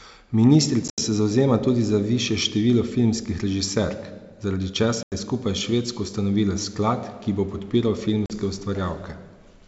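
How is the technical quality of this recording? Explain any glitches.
The recording has three short dropouts, each a case of packet loss on an ADPCM call. They fall at 0.88–1.00 s, just before "se zavzema tudi za"; at 5.03–5.14 s, after "število filmskih režiserk zaradi"; and at 8.26–8.31 s, after "sklad ki bo podpiral". Underneath, the wideband G.722 coding sounds clean, which fits a 64 kbit/s link.

Lost packets leave hard-edged silent holes of about 90, 90 and 40 ms. Because the decoder's predictor has drifted, the speech comes back slightly distorted for a moment before settling. That recovery is what distinguishes it from a plain mute.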